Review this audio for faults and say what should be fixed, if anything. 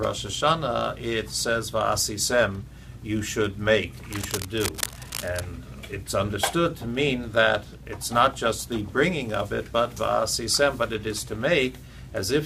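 Cable scratch noise, 4.1 to 5.41 s: dense, uneven bursts of scratching and rustling sit over the sound, roughly 10 dB below it. This is likely a worn cable, connector or control being moved, its contact resistance jumping rapidly. Replace or clean the suspect cable and connectors, and secure them so they cannot shift.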